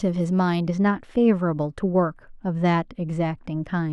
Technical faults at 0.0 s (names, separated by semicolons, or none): none